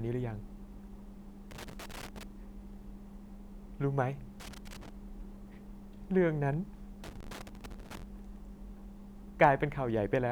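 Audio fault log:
1.51–2.23 s, 4.40–4.89 s, 7.04–8.03 s: loose connector crackle. An unstable contact repeatedly breaks and remakes the speech signal, producing irregular scratchy bursts. The waveform shows chopped gaps and sharp spikes; the spectrogram shows scattered broadband vertical streaks.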